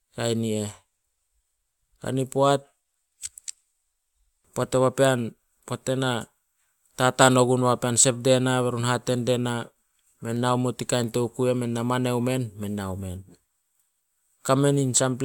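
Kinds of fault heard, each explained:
No kinds of fault are heard in this clip.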